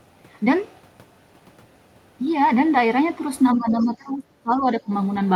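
From 3.54 to 3.86 s a faint second voice can be heard under the talker, roughly 25 dB down. This is the other side's voice leaking through, likely loudspeaker echo the canceller failed to remove. On a spectrogram it shows as weak, separate harmonic traces under the main speech.

The speech itself sinks from 3.55 to 4.26 s, by about 15 dB at its deepest, and again from 4.43 to 4.92 s, by around 20 dB, with the top end dulled and pieces dropping out. This is speech suppressed in double talk, likely the canceller turning down both sides at once when it could not separate them. The waveform shows the envelope pinched into notches, and the spectrogram shows upper bands fading to dark.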